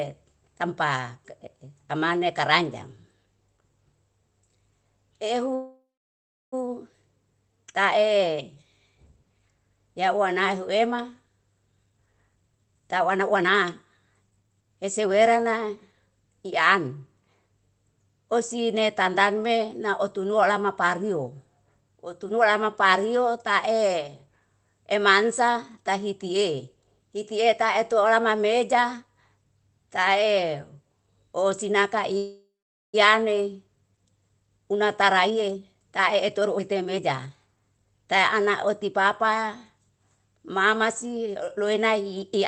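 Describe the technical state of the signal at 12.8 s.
At 12.8 s you're in the middle of a jitter buffer speed-up running from 11.86 to 13.64 s. The receiver had built up too much audio and kept snipping out short pitch-period chunks, about half a second in total. The speech plays roughly 30% fast at unchanged pitch and sounds rushed.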